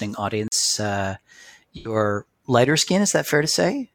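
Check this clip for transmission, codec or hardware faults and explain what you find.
Two faults are audible in this speech clip.

From 0.48 to 0.52 s there is a block of digital silence. For 40 ms the sound drops out to silence. The signal cuts out and returns with no fade. This is heard as a short hole.

From 1.76 to 1.95 s there is AAC frame loss with concealment. About 85 ms of audio is missing, which fits two lost frames. The decoder fills the gap by reusing the last good spectrum. This is heard as a brief smeared, noisy or phasey patch.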